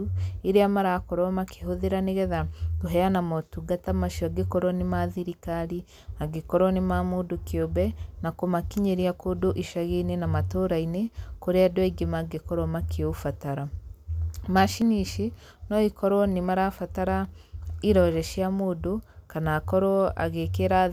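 At 9.55 s and again at 14.82 s the speech jumps forward, losing roughly 10 ms the first time and about 20 ms the second. The likely cause is a dropped buffer (overrun): the hardware overwrote samples before the software collected them, and the audio on either side was butted together. Unlike a dropout, no silent gap is left. The sound simply skips ahead at a hard splice.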